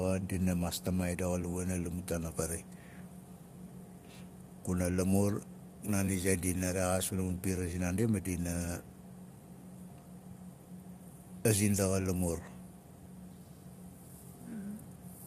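Speech, with low-delay AAC compression damage throughout. The voice sounds rough and grainy, with noise between harmonics. This likely comes from AAC-ELD coding at a low bitrate, around 32 kbps.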